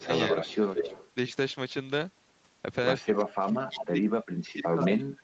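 The echo canceller likely could not tell the near talker from the far side's loudspeaker echo while both spoke, so it turned the speech down. This is speech suppressed in double talk. From 0.0 to 0.1 s the sound drops by roughly 20 dB, and two longer dips of about 10 dB follow at 0.27 to 0.5 s and 0.73 to 0.92 s.

From 0.15 to 1.1 s an echo leak is heard. The canceller likely left part of its microphone pickup in place, so a copy of the voice returns 157 ms late at about 5 dB below the speech.

From 3.01 s to the end the suppression deepens to around 30 dB, and the sound dips. Inside that stretch, from 3.67 to 3.85 s, a second echo leak comes back 168 ms late at about 10 dB below the speech. Throughout the clip the audio stops at 8 kHz, which is the normal bandwidth of the call codec.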